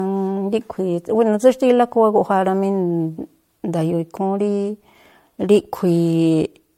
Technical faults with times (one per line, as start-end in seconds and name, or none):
0.00-6.78 generation loss